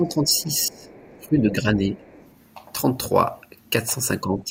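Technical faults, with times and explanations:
0.0–0.5 s, 0.68–0.89 s, 1.21–1.99 s and 4.21 s to the end: speech suppressed in double talk. The talker's level dips, slightly at first, then by about 20 dB, 10 dB and 15 dB. This is likely an echo canceller that couldn't separate overlapping talkers and pulled both down.
0.37–0.42 s, 0.61–1.29 s and 1.97–2.33 s: other side's voice leaking through. A faint second voice, about 30 dB below the talker, surfaces in scraps and longer stretches, likely loudspeaker playback that the echo canceller failed to remove fully from the microphone.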